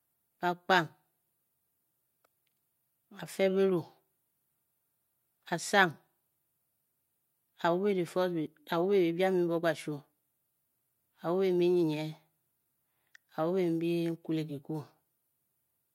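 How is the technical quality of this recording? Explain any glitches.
No glitches can be heard anywhere in the recording.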